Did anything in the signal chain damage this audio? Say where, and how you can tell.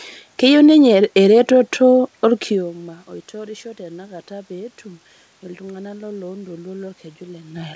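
No, nothing in the chain damaged it: the steady background is room noise, the level shifts around 2.5 s and 7.5 s are the talker moving relative to the mic, and the lack of content above 8 kHz is the expected band limit of a wideband call codec such as G.722.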